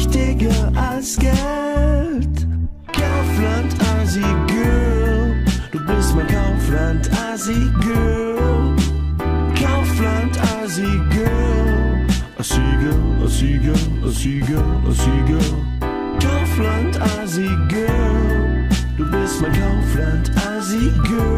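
No technical faults can be heard anywhere in this audio.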